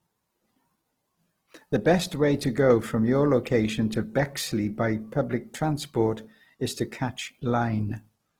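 From start to finish, the speech carries plainly audible Opus compression as its likely cause. The encoder works in its music mode and keeps the full band, with content reaching about 20.3 kHz. Too few bits are left to code each band properly, which points to a bitrate near 16 kbps. Starved bands get filled by folding lower ones or with noise. Tonal parts of the speech turn rough, grainy and noisy. There are few spectral holes, so little swirling.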